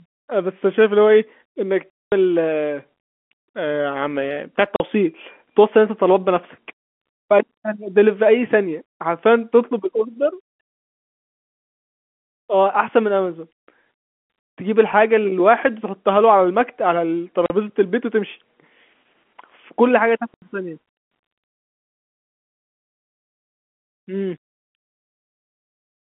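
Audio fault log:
1.92–2.12 s, 4.76–4.80 s, 17.46–17.50 s, 20.34–20.42 s: packet loss filled with silence. The sound drops out cleanly four times, for 220 ms, 40 ms, 40 ms and 80 ms. Each hole starts and stops abruptly. The gap lengths all step in 20 ms units, which fits 20 ms packets going missing, with the receiver playing silence in their place. The narrow telephone band from the G.711 line is audible around the gaps.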